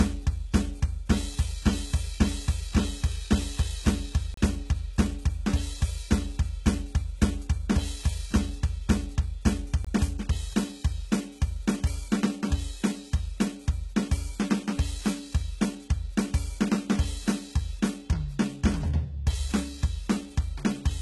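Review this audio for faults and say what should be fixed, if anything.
Likely HE-AAC compression at a very low bitrate, around 16 kbps: the treble is rebuilt from copied lower bands with nothing above 11.8 kHz, so the music's top end sounds gritty and metallic. Encode at a higher bitrate, or with plain AAC, to prevent it.

Block of digital silence: the output buffer likely went unfilled and was zeroed, cutting the sound abruptly. This happens at 4.34 s for 32 ms and at 9.85 s for 21 ms, the second fitting a 1024-sample buffer. Give the audio thread more buffer headroom so it always fills the output in time.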